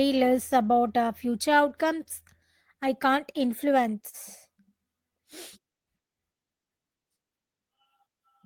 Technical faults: short stall from a late packet; short concealed packet loss

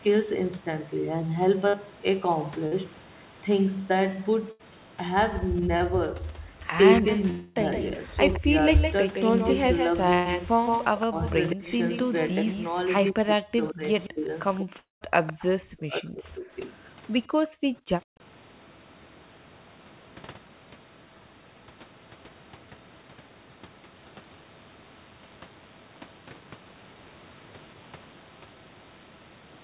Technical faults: burst of packet loss; short concealed packet loss; speech suppressed in double talk; echo leak; long network dropout; background gated by the echo canceller

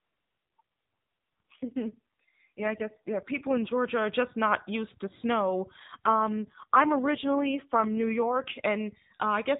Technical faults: AMR rate drop

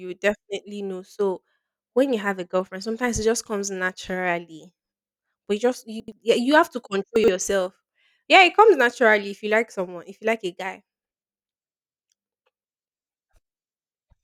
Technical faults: chunks out of order

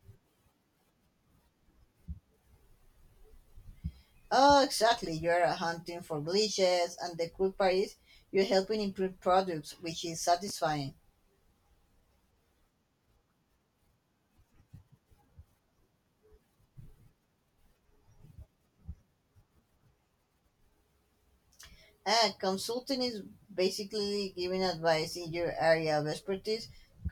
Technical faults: chunks out of order

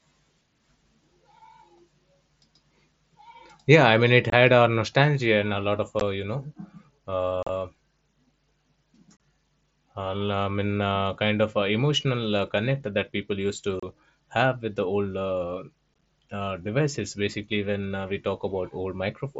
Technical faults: unconcealed Bluetooth headset packet loss

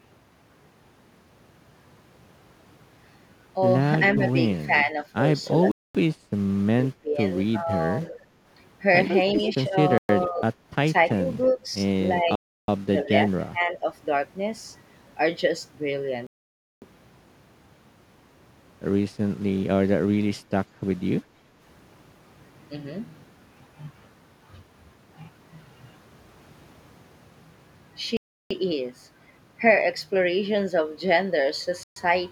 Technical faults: echo leak; speech suppressed in double talk; Bluetooth stall; background gated by the echo canceller

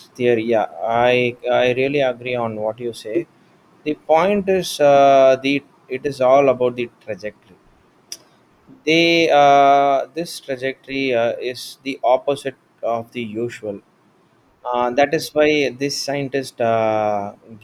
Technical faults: none

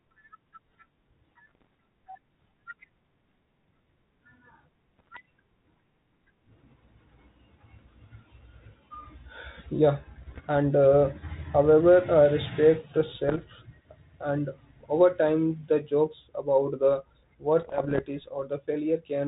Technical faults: bit errors on an ADPCM link

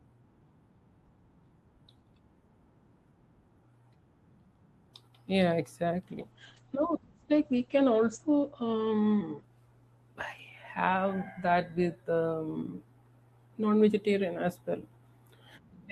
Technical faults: call bitrate drop

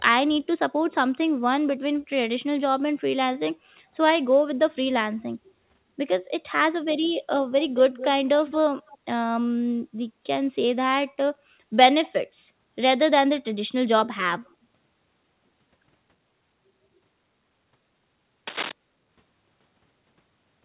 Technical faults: echo leak; cable scratch noise

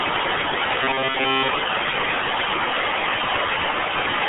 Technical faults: RealAudio 14.4 codec

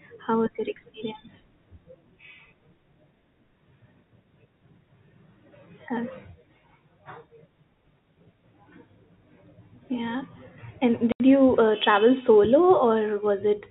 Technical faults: packet loss filled with silence

